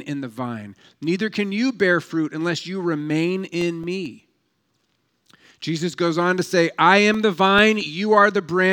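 From 3.39 to 4.72 s, seven CD scratch ticks occur at a steady rate of about five a second. A blemish on the disc defeats error correction once per turn. The player patches the gaps, leaving brief clicks. Five more follow from 6.92 to 7.81 s, just after "goes on to say", each lasting a couple of milliseconds at most.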